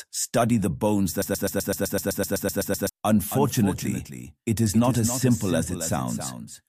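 A stalled player or stream likely kept resending its last fragment, causing a broken-record loop from 1.22 to 2.89 s: a 127 ms piece repeats back to back thirteen times, and the audio that should have filled that span is lost. From 3.31 s to the end, a second capture path or misaligned edit likely mixed in a doubled audio track, an exact copy trailing by about 0.3 s and roughly 10 dB quieter, with no reverberant tail.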